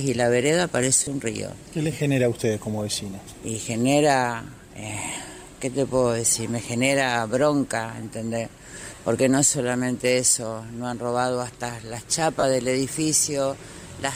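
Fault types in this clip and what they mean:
Lost LE Audio frames: four short dropouts, at 1.04 to 1.07 s, 5.14 to 5.16 s, 8.95 to 8.98 s and 12.40 to 12.44 s. Each runs about 20 to 30 ms, which fits two or three 10 ms LC3 frames going missing over the Bluetooth link. The decoder covers each gap by repeating the last spectrum with scrambled phase, so you hear a brief noisy smear instead of the sound. These gaps are too short for the fade toward silence to set in. The light codec coloring underneath isn't the problem here.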